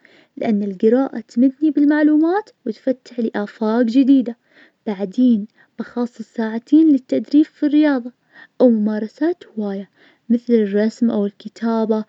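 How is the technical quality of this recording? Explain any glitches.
The recording has no technical glitches to explain. Nothing in the speech points to a fault anywhere in the signal chain.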